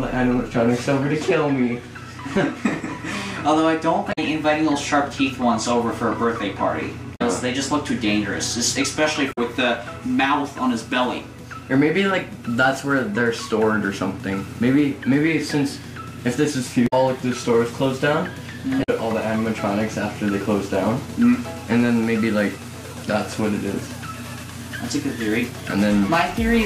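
At 4.09 to 4.19 s, 7.12 to 7.22 s, 9.29 to 9.38 s, 16.84 to 16.93 s and 18.80 to 18.89 s, the audio breaks into a short chirp or squawk. Each burst lasts about a tenth of a second. This is damaged data in a compressed stream. Bytes in the file were corrupted at these points. The decoder misread those frames and lost sync. It then hunted for the next valid frame header before normal decoding resumed.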